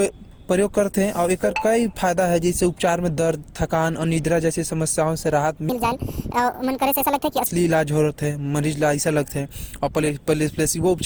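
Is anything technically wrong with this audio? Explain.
Yes, there are two faults in this speech clip.

Generation loss runs throughout. The speech sounds swirly, hollow and smeared, with softened consonant attacks. The likely cause is repeated lossy re-encoding, around seven passes, which fits a 64 kbit/s Opus chain. Each pass requantises on a shifted frame grid, so the noise builds up.

A section at the wrong speed runs from 5.69 to 7.46 s. The speech turns hurried and high, raised by about seven semitones. It plays at 1.6 times normal speed, likely because that stretch was fitted to the wrong clock, so pitch and tempo rise together.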